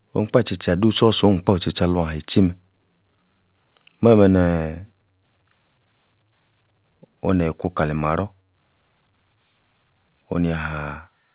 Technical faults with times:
none

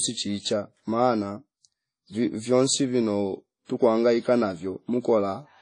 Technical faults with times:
0.00-5.62 WMA compression

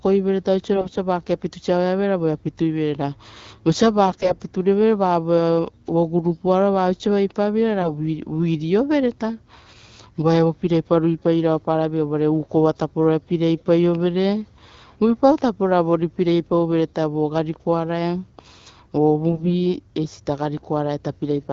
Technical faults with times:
0.74-0.98 AMR bit errors
4.08-4.37 AMR bit errors
7.80-7.90 AMR bit errors
19.31-19.51 AMR bit errors

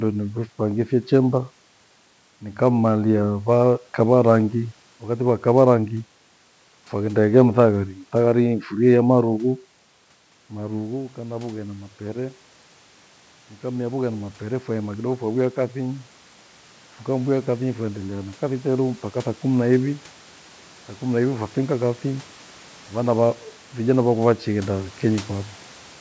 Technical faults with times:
10.53-22.35 automatic gain rising

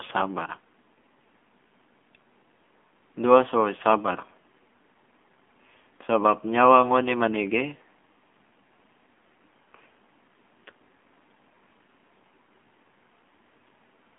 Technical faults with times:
0.00-14.18 AMR narrowband mobile codec

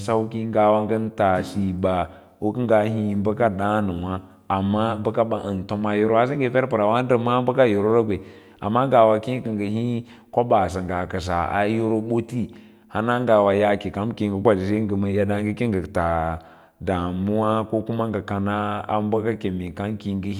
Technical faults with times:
9.77 dropped samples

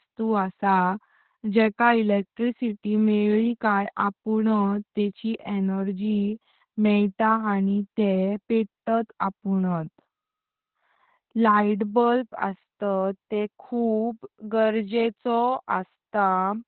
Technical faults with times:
0.00-16.67 Opus voice compression

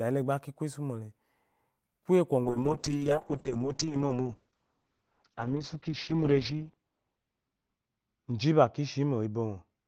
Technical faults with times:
2.45-9.87 call bitrate drop

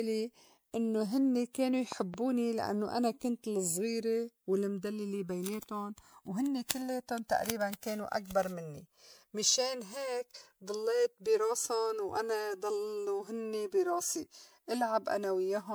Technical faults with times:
0.00-15.74 channels drifting apart
0.00-15.74 generation loss
1.92-2.16 loud pop

